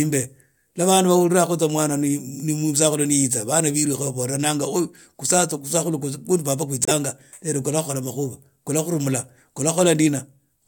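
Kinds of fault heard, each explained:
Corrupt frame muted: at 6.83 to 6.92 s the speech cuts abruptly to silence for 92 ms. That fits about four consecutive damaged compressed frames being rejected by the decoder and replaced with silence by the player. Timing afterwards stays in step.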